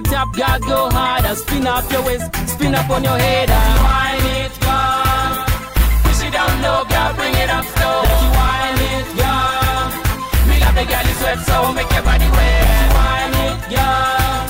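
No technical faults are audible anywhere in the clip.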